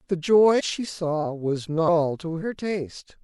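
At about 0.59 to 0.61 s, a run of compressed frames was skipped: a block of encoded speech never reached the listener, either missing from the stream or rejected by the decoder as corrupt. Playback jumps forward by roughly a third of a second, which fits about fifteen frames of around 26 ms each. Because adjacent frames overlap, the splice is a short smeared blip, not a sharp click, and the speech abruptly resumes further along.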